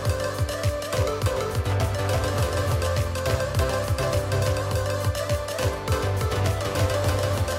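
A second capture path or misaligned edit has likely mixed the audio in twice: a doubled audio track, its full-band copy trailing by about 300 ms at roughly equal level throughout.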